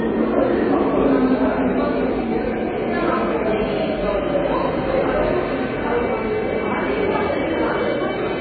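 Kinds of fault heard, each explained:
MP3 compression: Nothing survives above 4.5 kHz, and what remains sounds watery and swirly with smeared attacks, likely from heavy MP3 encoding at a very low bitrate, around 15 kbps. A spectrogram shows a hard ceiling at 4.5 kHz and flickering, patchy blocks below it.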